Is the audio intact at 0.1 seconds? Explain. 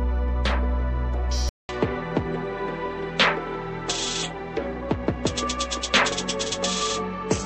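Yes, at 0.1 seconds the audio is intact, with no dropout, click, distortion or other fault at that moment.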